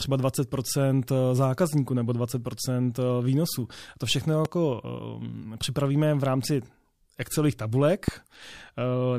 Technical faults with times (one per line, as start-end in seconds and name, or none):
4.45-4.47 loud pop
8.08-8.10 loud pop